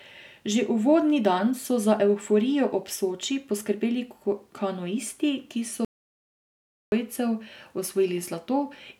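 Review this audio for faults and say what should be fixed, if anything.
Audio dropout to silence, 5.85 to 6.92 s: the speech cuts to silence for 1.07 s, with no room tone as a pause would have, likely from a lost input. Secure and monitor the input connection throughout recording.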